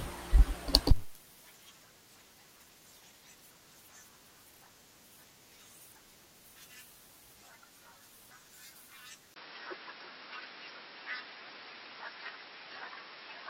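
At 9.34 s, after a brief gap of about 20 ms, the speech abruptly turns duller and boxier and stays that way until the end. Nothing above about 5.5 kHz survives, a faint new background noise sits roughly 40 dB below the voice, and loudness barely shifts. The likely cause is an input switched to a poorer device. A plain low-pass filter or codec bandwidth drop would narrow the band without the momentary silence, the changed coloration and the new noise floor.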